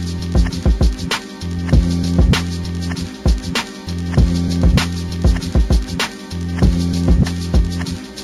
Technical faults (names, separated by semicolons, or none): imaging from linear upsampling